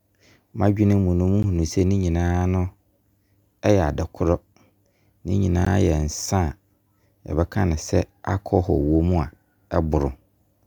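Twice the output buffer was evidently left unfilled and a block of digital silence, 15 ms long, was written in its place, at 1.43 s and again at 5.65 s. The speech drops abruptly to silence and returns with no fade, each time heard as a momentary break.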